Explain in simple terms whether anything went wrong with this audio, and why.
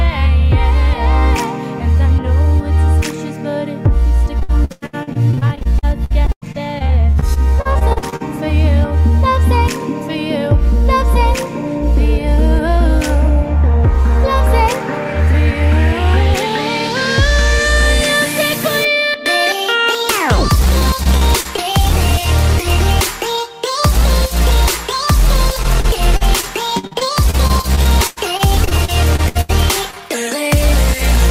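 Several things went wrong, all from pieces of the audio getting lost on the way.

The main problem is repeated packet loss, which gives a robotic sound. It happens from 4.39 to 8.37 seconds, from 20.79 to 21.60 seconds, and from 25.63 to 29.51 seconds. In each stretch, small chunks kept going missing. The receiver patched each hole by stretching the last bit of sound it had. In the first stretch there were 33 holes, the longest about a tenth of a second. The third had 21 holes. So the sound turns choppy and machine-like, with bits missing.

Right after that comes short concealed packet loss. Two brief holes follow each other, from 29.91 to 29.95 seconds and from 29.95 to 29.98 seconds. Each is only a few hundredths of a second. The gap was filled by carrying the previous sound forward, then blending back into the real audio. You hear it as a quick smear or wobble, not a full dropout.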